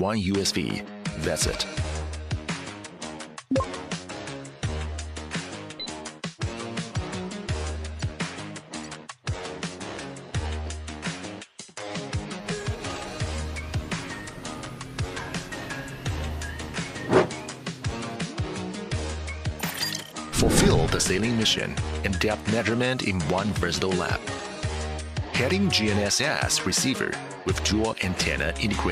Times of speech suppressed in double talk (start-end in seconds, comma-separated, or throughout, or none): none